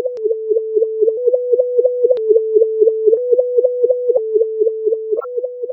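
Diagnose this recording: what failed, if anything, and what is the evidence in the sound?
The codec stage failed: a corrupt frame was decoded, with damaged bits in a few consecutive compressed frames played as if valid. Between 5.17 and 5.25 s, misread gains and codes place energy at wrong frequencies, producing a chirp, squeak, blip or burst of noise whose error peaks around -5 dBFS.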